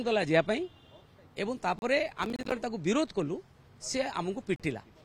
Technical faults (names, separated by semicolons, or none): Bluetooth stall; processor overload crackle